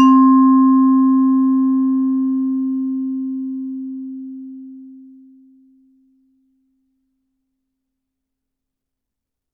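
A short recording of everyday sounds, with no technical fault to be heard in it. Nothing in the audio calls for a time, a value or a cause.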